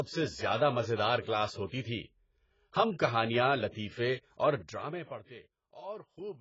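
Throughout the speech, heavy AAC compression, likely AAC-LC at a very low bitrate around 16 kbps, has starved the coder of bits, so nothing survives above 7.6 kHz. The audio sounds dull and smeared, with a warbling, fizzy texture on sibilants.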